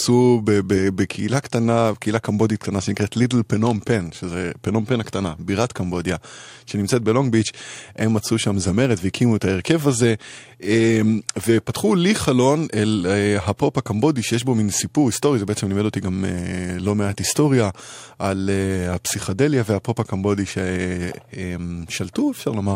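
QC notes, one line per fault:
No fault found, so there is no line per fault to give.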